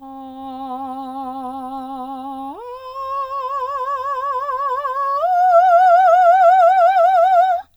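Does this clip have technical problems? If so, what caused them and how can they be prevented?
No, the music shows no technical problems and needs nothing prevented.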